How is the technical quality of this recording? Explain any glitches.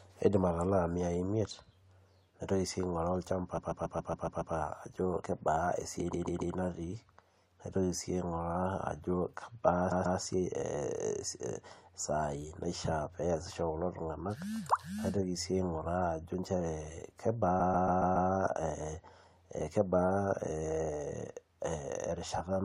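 The recording has repeated frames at four points: 3.57 to 4.54 s, 6.12 to 6.54 s, 9.90 to 10.18 s, and 17.59 to 18.29 s. The same 139 ms block of speech plays again seven, three, two and five times, respectively, which fits a short run of compressed frames being sent more than once. Each repeat is heard as a stutter and lengthens the speech.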